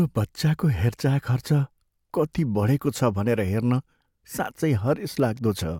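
No technical faults can be heard in the speech recording, and the signal stays steady and intact throughout.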